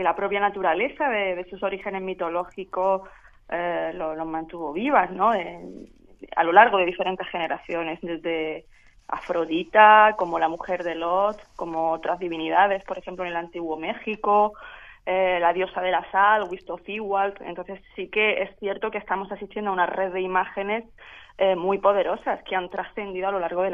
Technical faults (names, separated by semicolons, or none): none